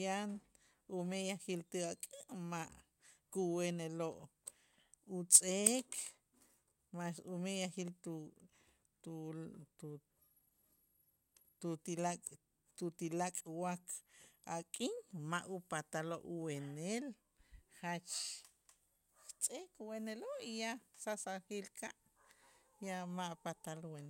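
No technical faults can be heard anywhere in this speech recording. Nothing in it points to a problem in how the sound was captured or passed along.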